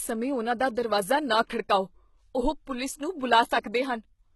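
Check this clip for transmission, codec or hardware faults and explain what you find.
A codec fault runs through the whole clip, heavy HE-AAC compression being the likely cause. The encoder appears to have kept only the lower spectrum and synthesised the treble by spectral band replication, copying lower bands upward under a coarse envelope, at a very low bitrate that fits roughly 16 kbps. Above the crossover the harmonics no longer align with the true speech, so sibilants turn gritty and metallic, and nothing remains above 11.8 kHz.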